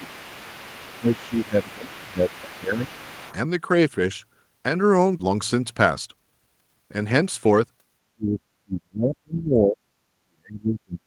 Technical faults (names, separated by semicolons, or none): speech suppressed in double talk; other side's voice leaking through; skip ahead; jitter buffer speed-up